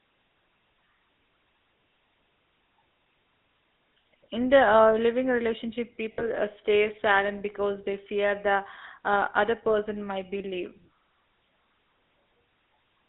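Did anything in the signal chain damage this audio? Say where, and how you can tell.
Yes. Throughout, the speech has a buzzy, gravelly roughness and is confined to roughly 250 Hz to 3.7 kHz. This is the GSM full-rate codec, at the codec stage. It models the vocal tract and drives it with a coarse pulse excitation, which fits a 13 kbps GSM link.

At the network stage, lost GSM frames cause a rough, metallic ring from 6.12 to 6.22 s, where about 60 ms is bridged, which fits three 20 ms frames. A shorter ring occurs from 10.38 to 10.42 s, about 20 ms. The decoder repeated the last good frame's settings.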